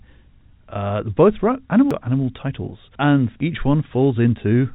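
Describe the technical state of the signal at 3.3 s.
At 3.3 s the audio is intact, with no fault present, only the band limit of the G.711 telephone coding, which passes nothing above about 3.8 kHz.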